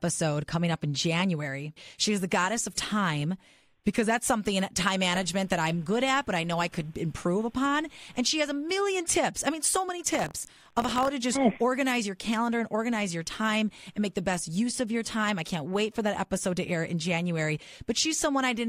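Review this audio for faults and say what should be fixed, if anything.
From 10.12 to 11.09 s there's buffer tearing, a robotic rattle at 43.1 Hz that fits a 1024-sample buffer. The writer and hardware reader have slipped, so a sliver of each buffer replays audio about 50 ms old, with hard joins. Keep the write pointer safely ahead of the read position.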